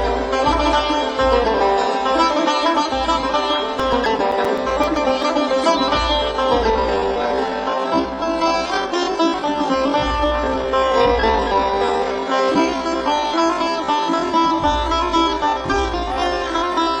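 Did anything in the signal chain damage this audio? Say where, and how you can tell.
Yes. From 3.54 to 5.23 s, disc playback throws regular ticks, about eight a second and each only a few milliseconds long. These are CD scratch ticks: a blemish defeats error correction once per revolution, unlike random clicks.

From 6.68 s to the end, the audio runs at roughly 0.55 speed with unchanged pitch. This is likely a time-stretched section, not slow playback, which would lower the pitch.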